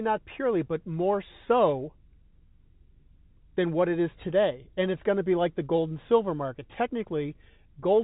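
No faults are audible in this speech clip.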